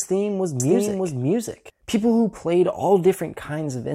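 From 0.6 s to 1.7 s, right after "theme was", a doubled audio track appears: a second, equally loud copy trails by roughly 0.7 s and cuts in and out abruptly, likely from an edit holding two copies. Unlike an echo, it has no decay or room colour.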